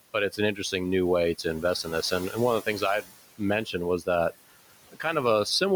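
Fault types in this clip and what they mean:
Noise suppressor artifacts: the suppressor pulls the steady room noise down by about 17 dB frame by frame, so the background dips between phrases and swells under the speech.
Speech cut by the noise suppressor: at 3.02–3.14 s and 4.89–5.05 s the suppressor mistook soft speech for noise, dropping it about 18 dB and 15 dB, so those moments sound swallowed.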